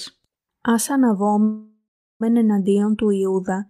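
Speech with a call audio freeze at 1.43–2.23 s: a smeared tail fades to silence, then resumes 0.77 s late with nothing lost, likely from a drained jitter buffer.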